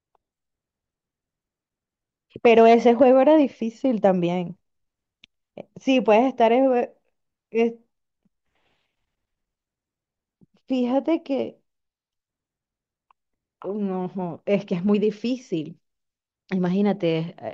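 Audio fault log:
Nothing in the speech stood out as faulty on listening.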